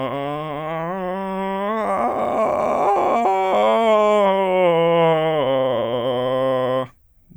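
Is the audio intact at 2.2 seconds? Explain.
Yes, the music at 2.2 seconds plays through cleanly, with no audible fault at that moment.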